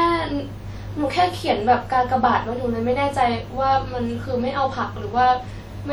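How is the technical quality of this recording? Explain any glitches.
The technical quality is compromised by codec damage that runs through the whole speech clip. Throughout, there is a ringing, washy smear with hiss that breathes with the signal, likely from WMA compression at a rate that fits about 48 kbps. Its long transform blocks spread quantisation noise over tens of milliseconds. Unlike a plain low-pass cut, the top end still reaches about 20.1 kHz.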